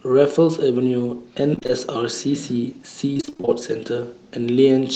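Repeated packet loss (robotic sound) strikes from 1.55 to 1.72 s and again from 3.13 to 3.49 s. Short holes up to about 25 ms keep recurring, each patched by stretching the previous sound, so nearly half of each stretch is concealment, giving choppy speech with pieces missing through the call path's band-limited, 8 kHz audio.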